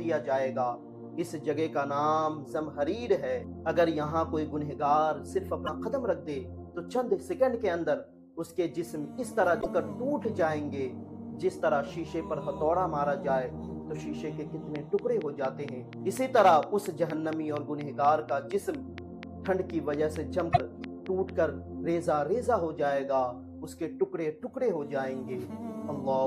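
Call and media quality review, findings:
Broken MP3 bit reservoir, likely: short skips at 5.66–5.69 s, 9.60–9.66 s and 20.52–20.58 s, each a brief chirp or hole. Audio jumps ahead one or two frames, fitting a 26 ms MP3 frame. Dropped frames leave the next ones pulling reservoir bytes that belong elsewhere.

Train of clicks from 14.76 to 21.30 s: about thirty near-identical ticks at a steady 4.25 per second, peaking about 10 dB above the program and audible in gaps too. Likely pulse interference from nearby gear or a faulty connection or power supply.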